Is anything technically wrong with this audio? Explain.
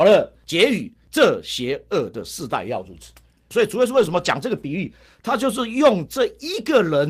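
Yes. From 3.93 to 4.27 s, several separate lost packets were rebuilt from error correction. The packets carrying this stretch of speech never arrived, but each following packet held a low-bitrate backup copy, which the decoder played in their place. The rebuilt audio, about 180 ms in total, which fits roughly nine 20 ms frames, has no gap or dropout. Because those frames come from the thinner copy, that passage sounds rougher and noisier than the speech around it.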